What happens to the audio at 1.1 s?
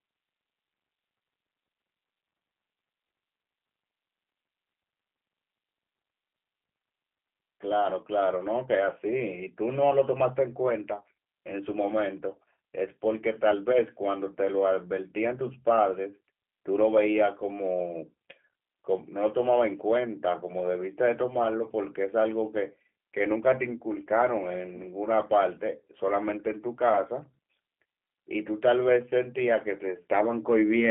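At 1.1 s you're hearing G.729 codec damage that runs the whole clip: speech rebuilt from pulses and a vocal tract model, fitting an 8 kbit/s stream, sounds rough and synthetic, with nothing above 3.7 kHz.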